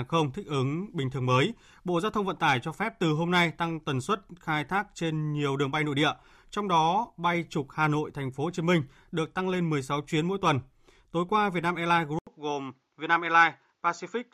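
At 12.19 s an 80 ms gap, then duller speech with nothing above 7.3 kHz and a new noise floor: likely input switched to a poorer device.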